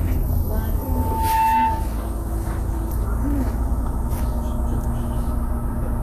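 Throughout the clip the sound is hissy and grainy, with roughened tonal parts, smeared attacks and nothing above 14.2 kHz. These are plainly audible traces of Vorbis compression, likely at a low setting; the damage fits a bitrate around 35 kbps. To save bits, the encoder has cut the top of the band and quantised the remaining treble so coarsely that fine detail has turned into noise of similar energy.

From 0.78 s to 2.02 s a loudspeaker feedback squeal takes over. A single tone at 890 Hz swells over a little under a second and then sits a few dB above the rest of the sound until it stops at 2.02 s. A microphone was picking up the loudspeaker it fed, and at 890 Hz the loop gain exceeded one, so that frequency kept building on itself until the amplifier limited it or the loop was broken.

At 2.91 s there is a CD skip: a brief tick with a dropout of only a few milliseconds, after which the sound resumes from a different point, so the continuity jumps. 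A knock or disc flaw made the laser lose its track and land on another turn of the spiral. The player muted briefly and carried on from the new position, which accounts for both the tick and the discontinuity.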